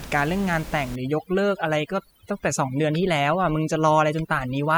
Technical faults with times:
0.96-4.78 overdone noise removal

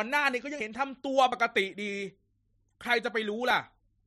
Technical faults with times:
0.60 dropped buffer (overrun)

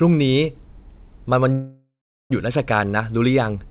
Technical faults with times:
1.52-2.32 call audio freeze

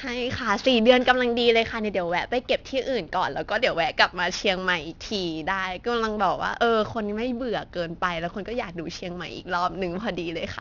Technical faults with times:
0.00-10.60 aliasing

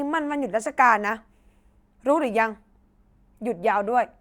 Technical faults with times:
none

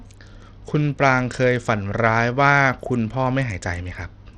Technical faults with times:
0.00-4.38 Bluetooth SBC compression

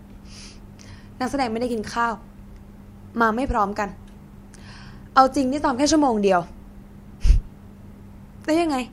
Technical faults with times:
0.41-7.77 clock drift buffer slips

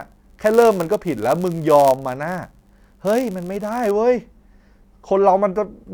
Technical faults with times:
0.00-3.91 block size mismatch (padded)

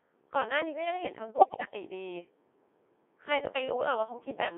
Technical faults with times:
0.00-4.57 Codec 2 vocoder
1.36-1.68 bit errors on digital voice radio

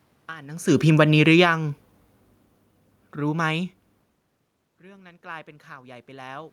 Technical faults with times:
0.82-3.72 automatic gain falling
4.80-6.52 automatic gain rising

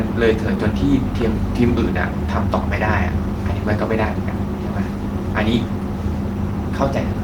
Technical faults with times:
none

